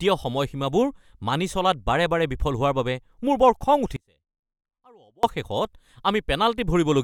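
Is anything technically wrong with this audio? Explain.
Yes. From 3.96 to 5.23 s the speech cuts out abruptly for about 1.3 s, leaving only a faint trace roughly 35 dB down, then snaps back. This is an audio dropout to a faint residue, likely a brief loss of signal while the downstream path stayed live.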